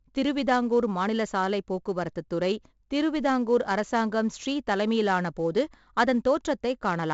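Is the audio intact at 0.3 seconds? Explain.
No. At 0.3 seconds the speech carries a gritty hiss that rises and falls with its loudness, sharp onsets sound roughened, and the top end is dull, with nothing above about 7.7 kHz. This is heavy 4-bit ADPCM compression, present for the whole clip. Each sample is stored as a coarse 4-bit step from a predicted value, which fits a 64 kbps stream. The step size follows the signal, so the noise tracks its level, but it adapts too slowly for fast attacks, leaving distortion.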